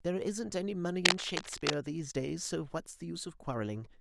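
From 1.05 to 1.75 s there's cable scratch noise, gritty rustling bursts riding a bit louder than the speech, most likely a worn connector being jiggled.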